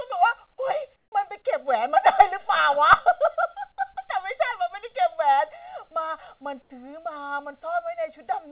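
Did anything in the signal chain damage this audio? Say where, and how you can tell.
Yes. A late channel, about one and a half milliseconds behind, was summed to mono, cutting evenly spaced notches from near 300 Hz: channel delay (comb filtering) throughout.

Comfort noise replaced the background from 0.96 to 1.12 s and 6.62 to 6.70 s, flat and about 9 dB, then 1 dB, quieter. The likely cause is discontinuous transmission during call processing.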